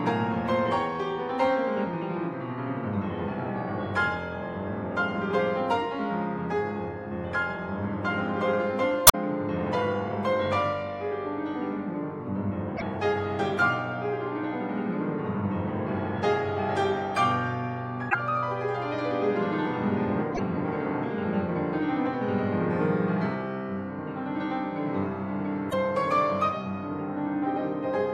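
Damaged data in the compressed stream makes the decoder misread frames and resync, causing short glitches at 9.05–9.15, 12.74–12.82, 18.07–18.15, 20.31–20.40 and 25.67–25.74 s.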